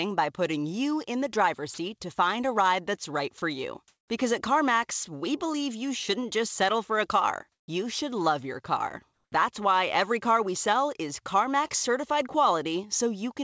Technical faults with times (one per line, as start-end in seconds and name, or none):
1.74-1.78 sound dropped by the voice detector
3.38-3.42 sound dropped by the voice detector
3.88-4.10 comfort noise in place of the background
7.52-7.68 comfort noise in place of the background
9.14-9.32 comfort noise in place of the background